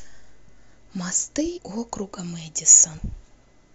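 Compressed frames are skipped in this speech clip at 1.56 to 1.58 s, where the audio jumps forward and roughly 150 ms of material never plays. The gap points to a run of around seven whole frames that were missing or rejected by the decoder as damaged. The sound resumes abruptly further along.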